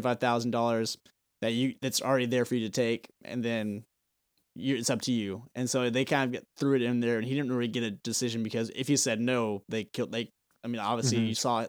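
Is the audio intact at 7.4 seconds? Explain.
Yes, the audio is intact at 7.4 seconds, with no dropout, click, distortion or other fault audible at that point in the speech.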